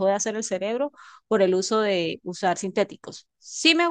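No technical faults can be heard anywhere in the speech.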